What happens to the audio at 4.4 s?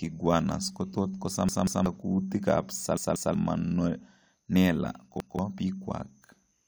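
Nothing goes wrong at 4.4 s; the speech carries on cleanly through that moment with no dropout, click, glitch or other fault.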